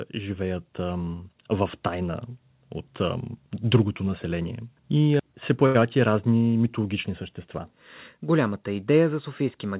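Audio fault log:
0.13–2.32 s, automatic gain rising: speech and background swell together by about 5 dB before "от ам" as gain control lifts a quiet input; the waveform envelope widens steadily.
3.64–6.71 s, automatic gain falling: after "от ам" gain control eases level down about 4 dB, voice and noise sinking together; the waveform envelope narrows gradually across three seconds.
5.66–5.76 s, burst of packet loss: about 80 ms of speech is missing. The receiver extended the last sound for 83 ms, turning it down as the gap went on.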